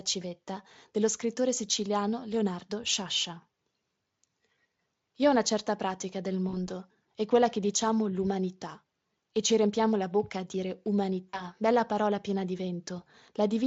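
At 6.49 s and again at 11.29 s there's VoIP packet loss concealed by the speech codec. Each gap fits about 40 ms, or two frames, and the decoder stretches the last sound into a fading buzzy or noisy fill over the Speex stream.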